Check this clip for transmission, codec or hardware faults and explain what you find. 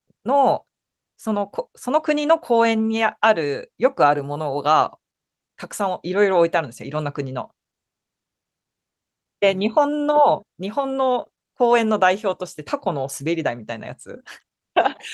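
No faults can be heard anywhere in this speech recording. There is nothing here that needs explaining.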